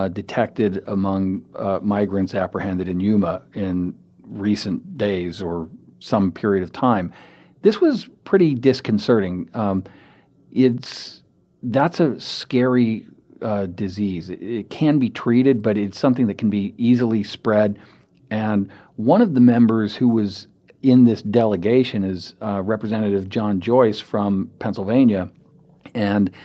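No faults can be heard anywhere in this recording.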